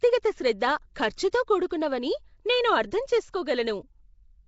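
A speech recording with plainly audible codec damage throughout: a rough, hissy halo around the voice, a smeared, underwater quality, and nothing above about 7.7 kHz. The likely cause is Nellymoser compression, the old Flash microphone codec, at a rate that fits 32 kbps. It codes short fixed blocks with a small, flat bit budget, so weaker bands get no bits and are refilled with noise, which produces the hiss and blur heard here. Pre-echo appears at 1.17 s and 1.69 s, where a short hiss, about 12 ms and 15 ms long respectively, runs just ahead of sharp onsets. A transform block spreads its quantisation noise across its full length, so when an attack falls late in a block, noise sized for the loud part leaks into the quiet moment before it. Those attacks also sound softened and smeared.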